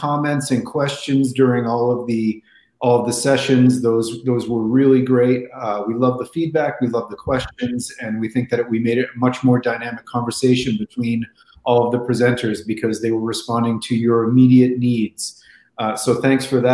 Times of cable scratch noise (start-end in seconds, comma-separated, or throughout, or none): none